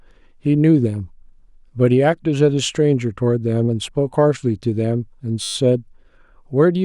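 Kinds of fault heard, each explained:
System hang loop: from 5.43 to 5.55 s the speech turns into a steady 100 Hz buzz, one 10 ms slice repeated twelve times. The driver froze while the hardware kept replaying its ring buffer, which fits a 10 ms buffer.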